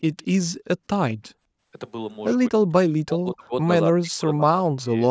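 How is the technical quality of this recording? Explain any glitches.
The speech has two kinds of glitch: a brief echo near the start and repeated dropouts of the talker from about 1.1 s onward. Nothing reaches above 8 kHz, consistent with call microphone processing.

From 0.18 to 0.25 s there is an echo leak: a very faint, delayed copy of the speech trailing the original by 210 ms. It is most likely loudspeaker sound the far end's echo canceller failed to remove. It repeats earlier sound rather than adding noise or reverberation.

At 1.14–1.29, 2.49–2.63, 3.02–3.53 and 3.96–4.97 s the speech is suppressed in double talk. The voice falls almost to silence in chunks, for longest in the last two spans. The cause is likely an echo canceller turning down the whole signal while both sides spoke. Unlike packet loss, these are deep level dips rather than clicks or repeated fragments.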